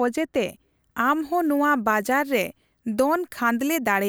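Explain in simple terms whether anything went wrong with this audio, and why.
From 0.48 s to the end, pre-emphasis left on: the treble boost from the broadcast-style recording chain was never undone, so the speech sounds thin, bright and hissy.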